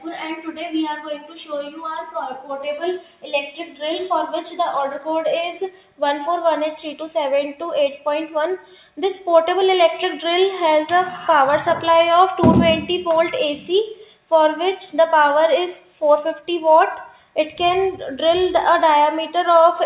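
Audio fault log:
Throughout: noise suppressor applied to music or sounds. A speech-tuned suppressor treats sustained tones and tails as noise and pulls them down by around 5 dB, so the level pumps. The waveform envelope dips after each attack, and everything sits below a 4 kHz ceiling, consistent with a narrowband G.711-style call path.
0.36–0.6 s, 1.18–1.37 s, 2.99–3.28 s, 3.51–3.82 s, 5.71–6.01 s, 8.58–8.98 s, 13.98–14.31 s, 17.05–17.36 s: sound cut by the noise suppressor. Each dip lasts a few tenths of a second and drops about 8 to 12 dB, clipping decays short. On a spectrogram, sustained bands fade abruptly while onsets stay bright.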